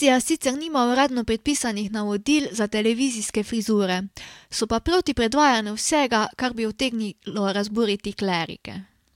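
A speech recording with nothing technically wrong with it.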